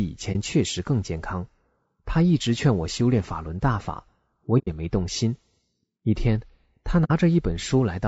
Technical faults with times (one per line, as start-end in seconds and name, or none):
0.00-8.08 low-delay AAC compression
0.32-0.36 AAC frame loss with muting
4.58-4.68 AAC frame loss with muting
7.04-7.12 AAC frame loss with muting